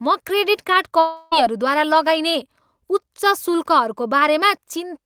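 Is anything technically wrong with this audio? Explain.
Yes. Just after "म क्रेडिट कार्ड", from 0.99 to 1.33 s, the speech gives way to a smeared buzz that carries on the last sound and fades, with no true silence before the speech resumes and about 320 ms of it is simply gone. This is most likely a long network dropout: packets stopped arriving, and the receiver filled the whole gap by extending what it last had rather than playing the lost audio.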